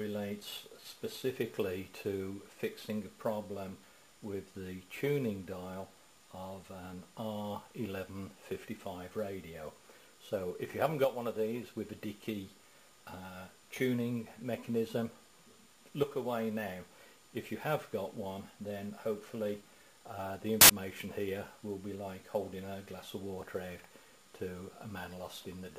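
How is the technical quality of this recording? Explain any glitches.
One clear fault: a short burst of samples built from the wrong bytes from 20.61 to 20.70 s, lasting about 83 ms. For that stretch the reader assembles each sample's bytes incorrectly, through a one-byte offset, swapped byte order or mismatched alignment. The rapidly changing low-order bits end up in the high-order position, so the values become essentially random. It is heard as a sharp blast of loud, harsh broadband noise that abruptly replaces the sound, then cuts back out.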